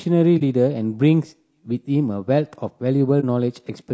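Throughout the clip, the speech sounds rough and grainy. Noise fills the gaps between harmonics, and the top band seems thin and synthetic. This is likely low-delay AAC compression, such as AAC-ELD. Its short frames resolve pitch poorly, and the damage fits a bitrate around 32 kbps.

At 0.38 to 0.42 s, and again at 3.20 to 3.24 s, there is AAC frame loss with muting. About 30 ms of audio drops out each time. The decoder zeroed the lost frame, and overlapping windows fade the sound out and back in. Each one is a brief dip.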